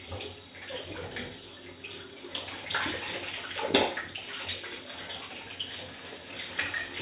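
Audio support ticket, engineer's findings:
Engineer's findings: no fault found in the audio for this ticket.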